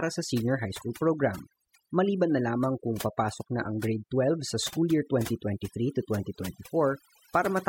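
Overdone noise removal runs throughout: single bands near the noise estimate vanish, leaving twinkling specks, where a gate would mute everything.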